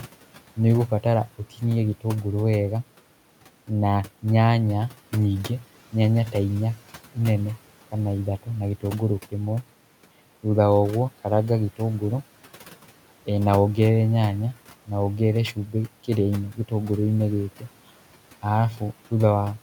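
A speech recording with one instance of speech cut by the noise suppressor, between 16.52 and 16.72 s, where about a tenth of a second of quiet speech is pulled down by about 12 dB along with the background. Unlike a dropout, the sound thins and fades rather than vanishing into silence, and the room noise, about 23 dB below the speech, is turned down with it.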